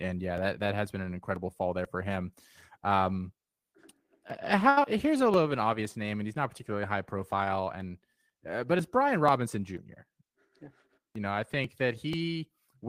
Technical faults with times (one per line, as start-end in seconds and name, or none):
0.38-12.88 periodic USB or driver dropouts
4.69-4.78 short stall from a late packet
4.83 short concealed packet loss
5.17-5.49 jitter buffer slow-down
10.05-11.06 jitter buffer speed-up